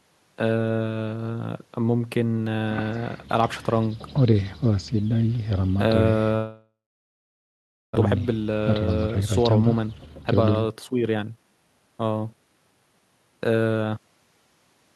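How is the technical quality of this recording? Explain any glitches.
Two glitches in the call audio, one right after the other, and the top end stops around 12 kHz, as you'd expect from the Opus call path.

From 6.35 to 7.97 s there's a long network dropout, likely. The receiver stretches the last sound into a fading buzz or hiss, then about 1.18 s of near-silence. When the audio resumes, roughly a second of speech is simply gone.

From 8.07 to 11.81 s the jitter buffer speed-up kicks in. The backlog, about half a second, gets trimmed by repeatedly cutting tiny pitch-period slices, so the speech runs at about 115% speed at normal pitch and sounds rushed.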